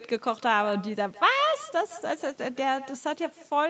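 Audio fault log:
throughout: echo with no canceller, the far-end loudspeaker re-enters its microphone unremoved, returning about 16 dB quieter roughly 150 ms later, seen as faint duplicate waveform bursts and spectrogram onsets.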